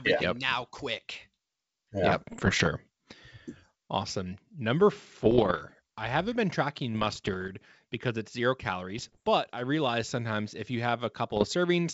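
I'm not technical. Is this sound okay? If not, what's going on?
No. You're hearing bit errors on an ADPCM link. Corrupted data on the call makes short pops and rough bursts at 2.18 to 2.68, 5.24 to 5.70, 6.93 to 7.51, 8.98 to 9.21 and 11.36 to 11.47 seconds.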